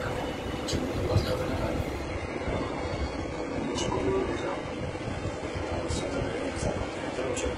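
From 2.03 s to the end, the treble abruptly thins, with nothing above 11 kHz and no gap at the switch. This is an adaptive stream at a lower bitrate, the drop pointing to HE-AAC around 12 kbit/s.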